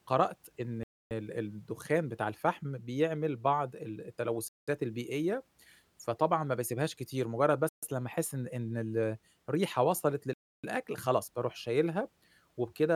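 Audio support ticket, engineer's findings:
Four dropouts in the speech, each a hard cut to silence and then a pickup: 0.83 s (about 275 ms gap), 4.48 s (about 190 ms), 7.69 s (about 140 ms), 10.33 s (about 300 ms). Likely a Bluetooth stall: interference holding up packets, the headphone buffer running dry, playback waiting on retransmits. Random spacing and varying lengths fit radio trouble rather than a fixed buffer fault. Worth checking link conditions.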